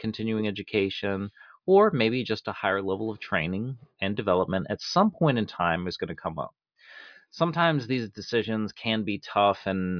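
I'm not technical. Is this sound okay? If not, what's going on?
Yes, it sounds fine, and nothing stood out as wrong when listening to it.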